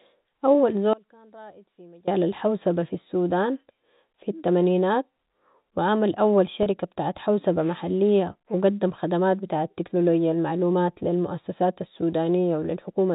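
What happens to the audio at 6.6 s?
Packet loss with pitch repetition: from 6.63 to 6.66 s, about 30 ms of the stream never arrived, which fits a single lost packet. The receiver filled the hole by looping the last pitch period it had received. Because the gap is shorter than the fade-out that concealment applies, the loop never decays to silence. Instead the sound is briefly frozen on one pitch, giving a slightly held, buzzy tone before the narrowband telephone-coded speech carries on.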